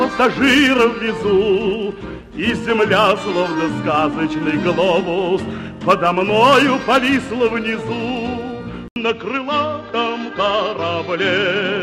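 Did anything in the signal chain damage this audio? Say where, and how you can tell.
Yes. An input switched to a poorer device at about 8.88 s, after a silence of 80 ms, and the change holds to the end. From there nothing sounds above 7.6 kHz, the level drops by about 5 dB, and a new background noise floor appears roughly 45 dB below the signal. That points to the capture stage, at the driver or device level, likely a change of microphone or a headset's call profile, whose narrower band and different gain replace the original input.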